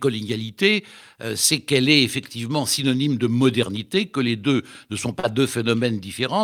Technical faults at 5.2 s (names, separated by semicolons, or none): short concealed packet loss